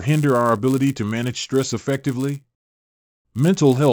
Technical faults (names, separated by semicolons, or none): resampler restarted on every block